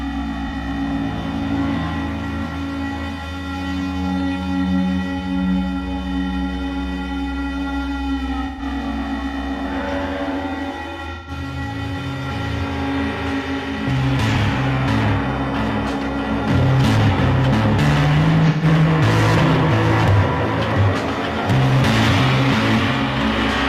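AAC frame loss with concealment hits at 0.48, 8.46, 11.14, 14.34 and 18.49 s. The decoder fills each gap from the last good spectrum. Each one sounds like a brief smeared, noisy patch.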